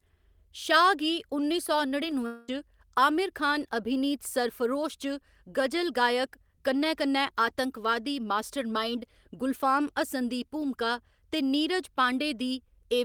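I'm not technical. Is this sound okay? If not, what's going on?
No. Between 2.26 and 2.49 s, right after "गी उन्नी सौ", the speech breaks off. For about 0.21 s the last sound is stretched into a fading buzz, and then speech resumes at "आमिर खान अभिनीत सरफरोश". The pattern is typical of a long network dropout. The connection likely stopped delivering audio for roughly 0.22 s. The receiving end papered over the gap by continuing the last sound, and whatever was said in that stretch is lost for good.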